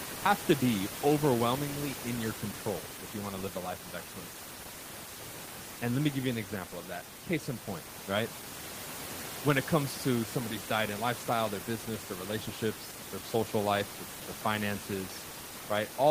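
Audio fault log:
No fault is logged in this clip, and the room noise underneath the speech sits about 10 dB below it as part of the recording.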